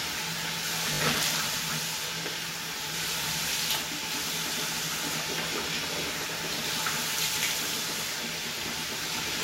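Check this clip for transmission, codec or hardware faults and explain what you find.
One fault is present: a repeated buffer between 0.94 and 1.0 s. New audio failed to reach the playback device in time, so it played the last block it held again, three extra times. Each repeat lasts about 20 ms, which fits a 20 ms buffer. The result is a short slice of sound played four times in a row with a hard join at each restart, heard as a quick stutter or brief buzz. No audio seems to be missing around it.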